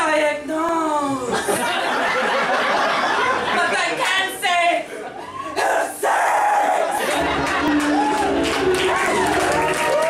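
Two devices likely running on separate clocks, mismatched by roughly a tenth of a percent, make the buffer between them drift and slip, dropping or repeating a few dozen samples at a time. From 0.69 to 9.77 s these clock drift buffer slips come as regular clicks every 0.7 s.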